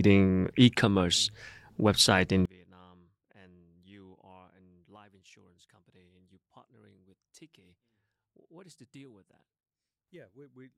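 From 2.45 s, just after "website in", the speech collapses to a faint remnant about 31 dB down and stays there to the end. This is most likely one channel inverted: with one side's polarity reversed, the centred content common to both channels cancels when they are summed to mono, leaving only their small difference. Unlike a dropout or gain fault, the sound doesn't go silent or just get quieter. A faint residue remains.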